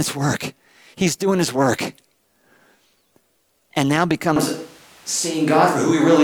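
The close microphone's signal was likely lost at 4.36 s, and from there to the end the recording runs on a switch to a distant microphone. The speech turns suddenly roomy and hollow with thinner bass, its level barely changing, while background noise sits about 30 dB below it.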